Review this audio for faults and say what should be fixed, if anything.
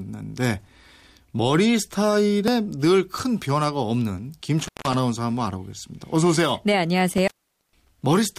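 Intermittent contact drops the speech out twice, from 4.59 to 4.94 s with the line open for about 166 ms, and from 7.10 to 7.89 s with it open for about 455 ms. A loose plug or cable breaks the signal path, so each gap is framed by crackle and holds faint hiss. On a waveform the envelope collapses to a thin noise floor between spiky edges; a spectrogram shows broadband vertical clicks bracketing a near-empty band. Reseat or replace the connector and secure the cable run against movement.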